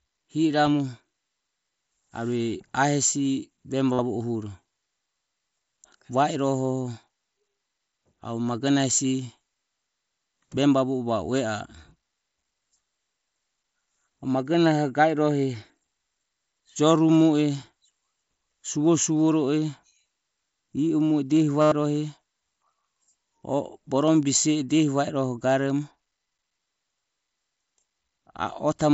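Speech, with concealed Bluetooth headset packet loss at 3.93–3.99 s (60 ms, just before "o huro") and 21.61–21.72 s (105 ms). The receiver fills each gap by repeating recent waveform, producing a buzzy, steady-level tone with a slight warble as real audio resumes.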